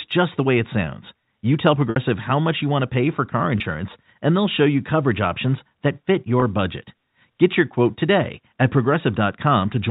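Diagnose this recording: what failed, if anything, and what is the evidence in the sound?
Packet loss with pitch repetition at 1.90–1.96 s, 3.58–3.60 s and 6.40–6.42 s, in the network path. Just before "how much you want", about 60 ms of speech becomes a held, buzzy tone, which fits three lost 20 ms packets. After "to pay for car" and after "that fit", single 20 ms gaps give briefer buzzy holds. The receiver's concealment loops the last pitch cycle across each gap, then cross-fades back into the G.711 A-law stream.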